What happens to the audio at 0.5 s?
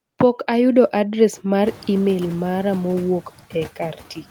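At 0.5 s the sound carries noise suppressor artifacts, present across the whole clip. The suppressor decides frame by frame which frequency bands hold steady noise and turns them down. Here the background is pulled down by about 9 dB. The noise floor follows the speech, sinking in the gaps and coming back up underneath it. The room noise is still quiet at this point; it only climbs later, around 1.5 s.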